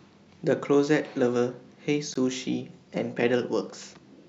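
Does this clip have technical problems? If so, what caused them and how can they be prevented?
Yes. At 2.14 s the speech drops out for about 16 ms, a brief hole with smeared edges, before resuming where it stopped. This is a gap at a join of encoded pieces: separately encoded segments were concatenated with each encoder's start-up delay and final-frame padding left in. Prevent it by encoding continuously or trimming encoder delay and padding before joining.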